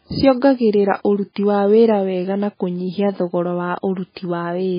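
From start to finish, the speech carries heavy MP3 compression damage. Nothing is heard above 5 kHz, so the top end sounds dull and boxed in. Quiet detail swirls and warbles, as faint frequency components drop in and out between frames. S sounds turn chirpy and metallic. Consonant attacks smear. The likely cause is an encoder starved of bits, at a rate that fits something near 16 kbps.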